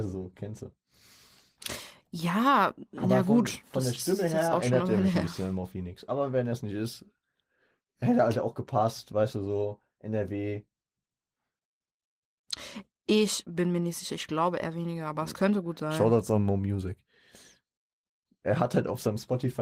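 The speech sits on an Opus voice-compression path working as intended, with its full audio band intact and no technical faults present anywhere in the signal.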